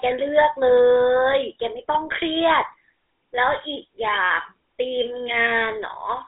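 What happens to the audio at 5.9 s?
GSM full-rate codec coding is present at 5.9 s, as it is across the whole clip rather than starting or stopping there. The codec rebuilds speech from a vocal-tract filter excited by a sparse train of regular pulses, discarding most of the fine excitation detail. Its grain fits a roughly 13 kbps coder. The result is a clearly audible buzzy, gravelly roughness, with the sound squeezed into a band of about 250 Hz to 3.6 kHz and nothing above 3.8 kHz.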